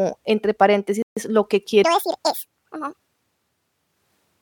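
At 1.02 s the speech drops to dead silence for about 143 ms, resuming at 1.17 s where it left off. This Bluetooth stall likely came from interference delaying packets, so the headphones' buffer emptied and playback waited for the resent data.

From 1.84 s to the end, the speech turns high and hurried, running 1.7 times too fast and sitting close to ten semitones above its natural pitch. This section at the wrong speed was likely played against the wrong clock, shifting speed and pitch together.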